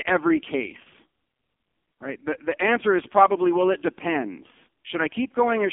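The whole recording has passed through the AMR narrowband mobile codec, whose 8 kHz sampling and line filtering strip the speech to a 250 Hz to 3.4 kHz telephone band. The heavy buzzy, synthetic coarseness fits its lowest 4.75 kbps mode.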